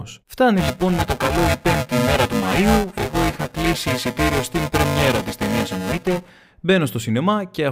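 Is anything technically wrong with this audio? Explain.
Yes. From 0.57 to 6.30 s there is buffer tearing: writer and playback pointer have slipped, so each period, which fits a 128-sample buffer, splices in roughly two-fifths stale audio about 5 ms old. The speech carries a robotic 375 Hz buzz whenever it is sounding.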